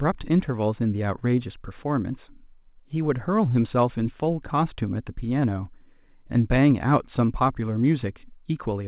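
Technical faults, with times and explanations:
No technical faults detected.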